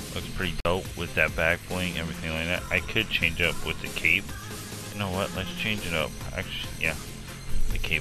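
At 0.60 s the receiver stopped getting usable data, either because the signal dropped or because incoming frames failed their error check. This is a digital broadcast dropout: rather than play corrupt frames, the decoder muted until valid ones arrived again. The sound drops to silence for roughly 48 ms and resumes at 0.66 s, a gap that fits two lost frames. Whatever was transmitted in that short hole is simply missing from the programme.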